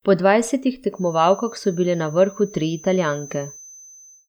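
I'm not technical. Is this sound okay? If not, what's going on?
No. From about 0.89 s to the end, a thin, steady whistle at a very high pitch, around 6.2 kHz, sits quietly behind the speech, swelling and fading slowly. This feedback whistle is likely the microphone picking up its own loudspeaker, hovering just short of a full howl.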